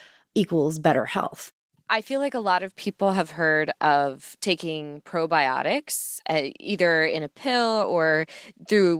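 No faults are audible in this speech; the Opus voice coding, in hybrid mode at what sounds like about 20 kbps with the full band kept, leaves only a light coding texture.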